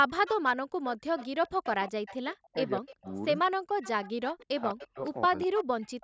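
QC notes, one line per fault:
0.09–0.47 s, 0.86–3.15 s, 3.81–4.86 s and 5.37 s to the end: echo leak. A faint second copy of the speech trails the original by a steady 202 ms, about 15 dB down in the first stretch and about 20 dB down after that. This is likely a far-end loudspeaker whose echo canceller let part of the pickup return. Room reverberation would be a smooth, diffuse tail, but this is a distinct repeat at one fixed delay.
1.13–1.18 s, 2.32–3.07 s, 3.50–3.54 s and 4.71–5.76 s: speech suppressed in double talk. The level of the speech is pulled down while the echoed signal is also present, about 15 dB at 1.13 s and as much as about 40 dB in the later spans. The longest cuts are roughly 0.4 s and 0.7 s. The likely cause is the canceller mistaking the near talker for echo and ducking both. This differs from packet-loss dropouts, which leave abrupt, clean gaps. These dips follow the overlap with the other side.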